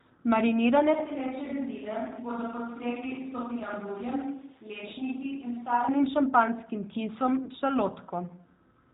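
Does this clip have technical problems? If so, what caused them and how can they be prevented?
Yes. The speech was carried over a G.729 codec at 8 kbit/s, which doesn't send the waveform at all. It sends a vocal tract filter, a pitch predictor and a few pulses per frame, and the decoder rebuilds speech from those. Everything above 4 kHz is discarded, so sibilants and brightness are gone, and the rebuilt excitation makes the speech sound plainly rough and synthetic for the whole clip. To prevent this, use a wideband codec such as G.722 or Opus at a higher bitrate wherever the network allows.

A burst of VoIP packet loss concealed by the speech codec occurs from 7.44 to 7.51 s. About 40 ms of audio never arrived, which fits two consecutive 20 ms packets being dropped. The decoder kept extrapolating from its last pitch and filter with falling gain, so that stretch turns into a buzzy tone or coloured noise that fades, and the speech just after it comes back weak or distorted while the decoder recovers. 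To prevent this, reduce network congestion and use a larger jitter buffer or forward error correction so lost packets can be recovered.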